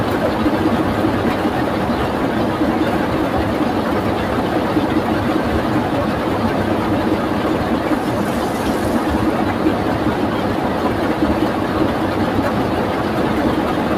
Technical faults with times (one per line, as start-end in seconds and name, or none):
none